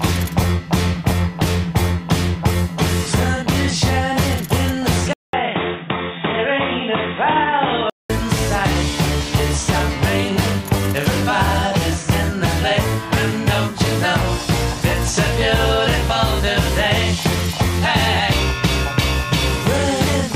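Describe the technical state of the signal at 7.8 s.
At 7.8 s you're inside a stretch from 5.13 to 8.10 s where the sound turns dull and boxy, with nothing above 3.8 kHz and a new noise floor sitting roughly 40 dB under the signal. It opens with a 200 ms gap. Loudness stays about the same. That's most likely an input switched to a poorer device: the capture jumped to a narrower-band mic or headset path with its own character.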